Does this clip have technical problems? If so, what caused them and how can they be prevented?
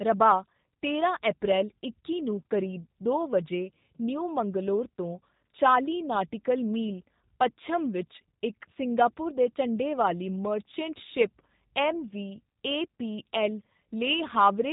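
Yes. Throughout, a G.729 codec at what sounds like 8 kbit/s rebuilds the speech from pulses and a filter, leaving it rough, synthetic, and cut off above 3.8 kHz. Using a wideband or higher-bitrate codec for this link would prevent it.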